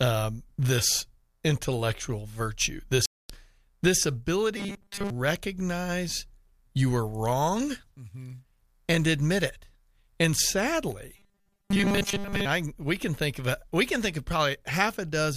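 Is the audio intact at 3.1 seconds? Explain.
No. From 3.06 to 3.30 s the speech cuts to silence for 238 ms, then resumes. This points to a Bluetooth stall. Interference likely held up packets. The headphones' buffer emptied, so playback paused until the resent packets arrived.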